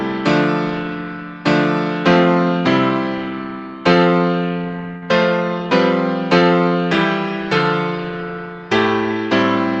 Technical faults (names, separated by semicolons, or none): short stall from a late packet